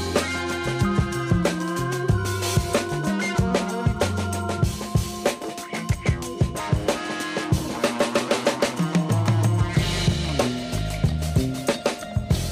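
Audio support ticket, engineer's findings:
Nothing stood out on listening; no audible fault found to attribute to any component.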